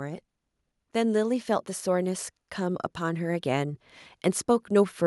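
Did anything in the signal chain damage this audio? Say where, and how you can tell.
Yes. From 0.92 s to 3.88 s the speech and the background noise swell together, climbing by about 5 dB over roughly three seconds rather than jumping at once. That joint, gradual lift is automatic gain rising, and it places the damage in the call processing stage: the automatic gain control judged the input too quiet and slowly raised its gain, lifting the noise floor along with the voice instead of the voice alone.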